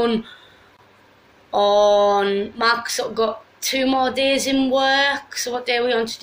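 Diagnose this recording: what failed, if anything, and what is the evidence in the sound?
Gap at a join of encoded pieces, 0.77 to 0.79 s: a 21.5 ms gap with smeared edges, codec stage, where untrimmed encoder delay and end padding sit between separately encoded pieces.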